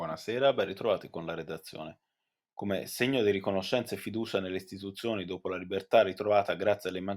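Nothing goes wrong anywhere in this speech recording, so there's no fault to point to at any moment.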